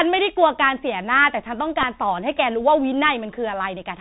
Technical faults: Bluetooth CVSD headset codec; Bluetooth headset packet repeated

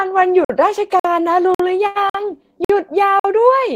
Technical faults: gap between chunks; short stall from a late packet

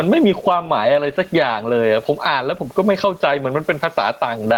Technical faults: gain pumping

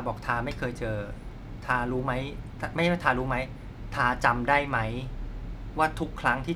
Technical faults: none

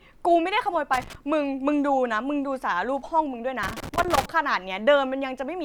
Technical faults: loose connector crackle

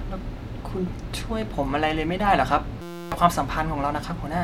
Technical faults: system hang loop

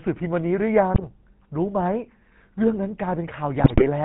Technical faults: GSM full-rate codec; GSM bit errors

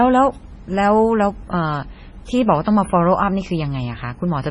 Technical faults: MP3 compression

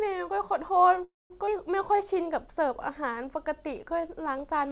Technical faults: call audio freeze; skip ahead; jitter buffer slow-down

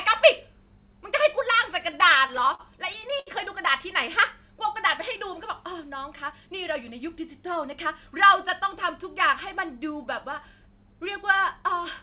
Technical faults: repeated stalls (stutter)

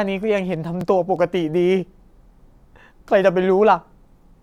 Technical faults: overlapping chunks

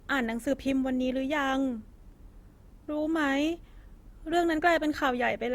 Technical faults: low-bitrate audio saved at a high bitrate

